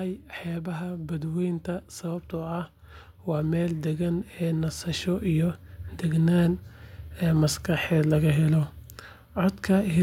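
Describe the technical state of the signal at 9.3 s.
At 9.3 s the speech signal is intact, with no audible fault at that moment.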